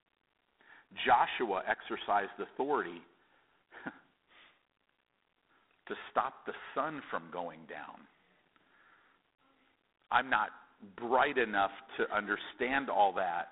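A harsh, rasping hiss rides on the speech from start to finish, swelling and fading with its level, and the sound is boxed into a narrow telephone band of roughly 250 Hz to 3.6 kHz, with nothing at all above 3.8 kHz. This is G.726 ADPCM damage: each sample is sent as a coarse difference from an adaptive prediction, and the level of quantisation noise points to the 24 kbit/s mode, where too few bits leave that gritty, level-following hiss.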